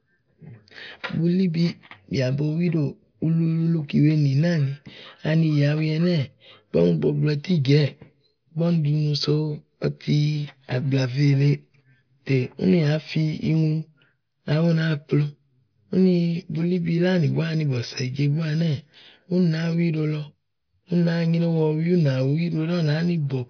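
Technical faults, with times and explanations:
No technical faults heard.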